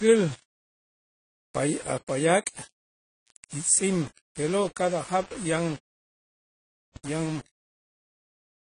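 From start to finish the speech carries grainy, signal-following distortion, the sound of low bit depth without dither. The likely cause is rounding to very few levels, consistent with about 6 bits, with no dither to break up the error. The error sits only around 20 dB below the signal, so quiet passages turn gritty. On a waveform the trace looks stepped into a small set of levels. A spectrogram shows broadband noise that rises and falls with the speech.

Also present throughout is plainly audible AAC compression. The audio sounds dull and smeared, with a warbling, fizzy texture on sustained vowels and sibilants. The likely cause is AAC-LC coding at a low bitrate, which fits about 24 kbps. Quantising frequency lines coarsely against a hearing model leaves this kind of damage. Nothing remains above 10 kHz, so a spectrogram shows a hard ceiling there, with patchy, blocky gaps and smeared energy in the bands below.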